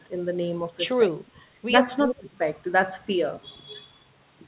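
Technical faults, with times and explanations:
1.22–1.82 s and 2.05–2.39 s, speech suppressed in double talk: the speech dips about 20 dB in bursts, likely an echo canceller ducking both talkers, unlike packet loss, which leaves abrupt gaps with clicks.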